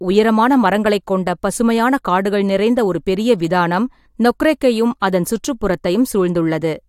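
No faults detected anywhere in the speech.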